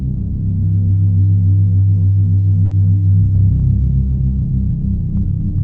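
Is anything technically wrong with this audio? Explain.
Yes. At 2.65–2.74 s, a burst of packet loss: the receiver held and faded the last sound for 60 ms, then resumed further on. Unlike a simple dropout, the gap is filled, not silent.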